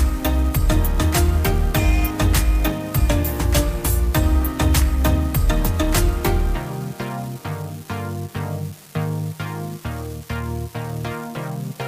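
From the start to the end of the clip there is an unreliable data bit. One line of the digital word is marginal, so in a random fraction of samples that bit reads wrong. Each error adds or removes the same fixed step, about -28 dBFS, producing identical spikes scattered at random. The result is a constant crackling fizz laid over the audio that carries on unchanged through the quiet gaps, where it is most exposed.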